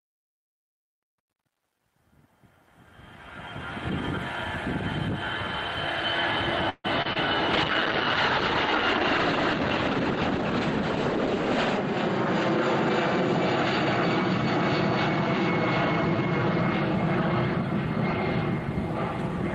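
Truncation distortion on a fade runs from 0.0 to 4.02 s, harshest up to 2.31 s. The fade-in curve itself is smooth, but its quiet start is quantized without dither to roughly 10-bit resolution, so it sounds gritty. A call audio freeze at 6.69 to 6.86 s holds the last sound as a fading buzz or hiss, with about 20 ms of silence, likely from delayed packets draining the jitter buffer, inserting 147 ms without losing anything. Short concealed packet loss at 7.02 and 7.13 s replaces about 20 ms each time with extrapolated sound, heard as quick smears or wobbles. A call bitrate drop from 7.55 to 16.73 s, consistent with a fall from about 32 to 12 kbps, narrows the bandwidth from 20 kHz to 8 kHz, leaving the audio muffled and watery, worst for about 4 s.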